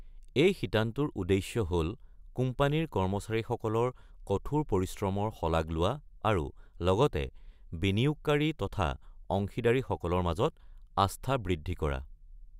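Nothing technical goes wrong anywhere in this speech recording, so there's really nothing here to flag.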